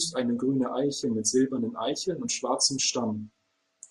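No faults detected anywhere in the speech.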